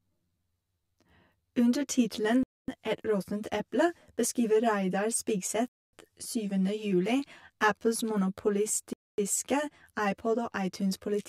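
From the first moment to the last, the speech has a hollow, phasey quality, the signature of channel delay (comb filtering). One channel seems to run around 10 ms behind the other, and when the two fold down to mono, the shared content cancels at evenly spaced frequencies. That puts the first notch somewhere near 40 Hz, with more stacked regularly up the spectrum, so the voice sounds thin and slightly tubey the whole way through.

On top of that there's a gap between chunks, three times: 2.43 to 2.68 s, 5.68 to 5.93 s, and 8.93 to 9.18 s. Each is a 250 ms hole, arriving after every 3 s of audio. That steady rhythm points to the audio being delivered in 3-second blocks with silence slipped in at each join, likely from padding or a player starting each block late. Nothing seems to go missing, but the speech stops dead and resumes.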